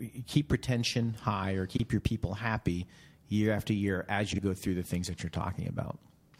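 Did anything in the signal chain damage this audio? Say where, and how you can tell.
Yes, frames out of order in network delivery. At 1.69–1.80 s, after "keep retention high or", and 4.32–4.39 s, after "year after year as", adjacent blocks of roughly 39 ms and 36 ms play swapped. This creates a garbled flutter.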